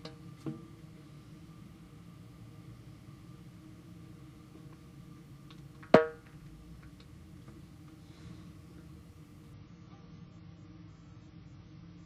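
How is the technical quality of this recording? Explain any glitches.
One clear glitch near the end. From 9.54 s to the end, the adaptive stream switches to a lower bitrate: everything above 7.6 kHz vanishes and the sound turns grainy and swirly, with no gap. That fits the player dropping from a decent AAC stream to a very low-bitrate one, around 16 kbit/s, when the connection slowed.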